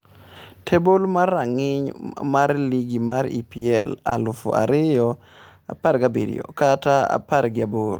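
In this speech clip, brief smears and small wobbles occur at 3.07 to 3.13 s after "mar rang'iny mar ligi", at 3.57 to 3.63 s just before "aluf ariyo", and at 4.09 to 4.13 s. These are short concealed packet loss: 40, 40 and 20 ms of audio failed to arrive, and the receiver covered each hole by extending the preceding sound before blending back. At 3.77 to 3.87 s, also leading into "aluf ariyo", a held, fading stretch gives way to audio resuming further on. This is a burst of packet loss: about 80 ms went missing, was filled by continuing and attenuating the last sound, and is skipped over.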